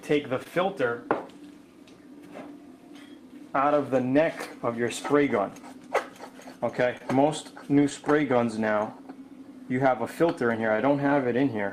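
Throughout the clip, clock drift between sender and receiver is present: the sender's clock runs about 2 percent slow, so the jitter buffer keeps draining. Unlike random network jitter, the timing slips always go the same way.

From 0.39 s to 11.57 s, repeated timing corrections stretch the audio to stay in step, running at 99 percent speed and adding about 150 ms overall. The result is a slightly unsteady, dragging tempo rather than distinct clicks. These unevenly spaced edits differ from packet loss because no sound is removed.

At 0.44 s to 0.47 s there is a short stall from a late packet. The buffer ran empty, and the last sound was held for 15 ms before playback resumed where it had stopped. Similar holds of 25 ms at 6.98 s to 7.01 s and 18 ms at 10.76 s to 10.79 s give a brief buzzy sustain or dip. No audio is skipped.

Between 3.68 s and 5.64 s, scattered short gaps appear, roughly three of them, filling about 30 ms in total, with the longest around 15 ms. 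Each is patched by continuing the preceding sound. They come across as tiny ticks or smears rather than the single held note of a stall.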